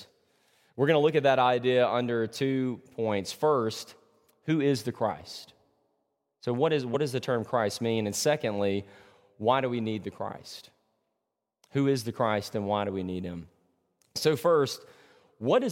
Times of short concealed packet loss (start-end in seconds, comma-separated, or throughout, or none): none